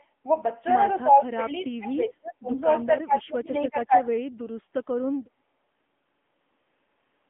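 The whole thing has gone through the AMR narrowband mobile codec, and you can hear it right away. Nothing gets through above 3.7 kHz, and the usable band sits at about 200 Hz to 3.5 kHz. The speech has that buzzy, synthetic edge you get when the vocal-tract model runs short of pulses, which fits one of the lower AMR-NB modes at around 8 kbps. The codec damage is plainly audible.

From 1.01 to 2.49 s, the talker's level dips, dropping by as much as about 30 dB across nearly the whole stretch. It happens again from 2.82 to 4.2 s, covering roughly a second of that span. The pattern is typical of speech suppressed in double talk. The likely cause is an echo canceller that couldn't separate this talker from the far end's loudspeaker echo while both were speaking, so it turned everything down.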